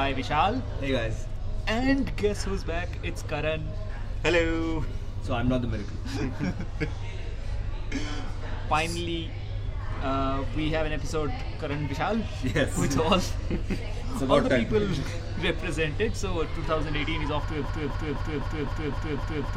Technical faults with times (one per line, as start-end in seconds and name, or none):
17.64-19.57 broken-record loop